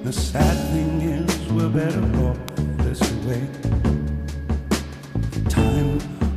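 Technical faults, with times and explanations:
2.49 s, electrical switching spike. A single sharp snap cuts in on top of the sound. It lasts only a millisecond or so, far too brief to carry any pitch. It peaks at about -10 dBFS. The cause is likely a nearby switch, motor or static discharge. It would have arced once, and the audio line picked up that burst as a click. The click sits over the sound rather than replacing it.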